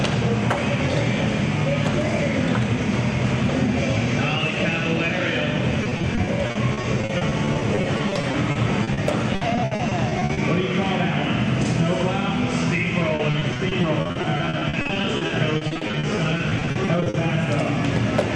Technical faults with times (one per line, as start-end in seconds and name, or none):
5.83-8.99 repeated packet loss (robotic sound)
9.35-10.39 repeated packet loss (robotic sound)
13.15-17.16 repeated packet loss (robotic sound)